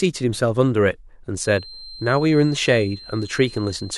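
This speech clip carries a feedback whistle from 1.32 s to the end. A thin, steady tone near 4.1 kHz sits well below the speech and swells and fades slowly in level. The likely cause is a loudspeaker-to-microphone loop held right at the edge of feedback.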